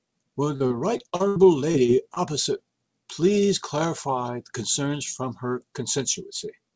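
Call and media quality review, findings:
Choppy, robotic speech from 0.56 to 2.18 s, with short pieces dropping out. Repeated packet loss: late or lost packets concealed by stretching the preceding audio, about 17% of that span filled, longest gap 80 ms. Content above 8 kHz is absent throughout, consistent with a G.722 wideband call path.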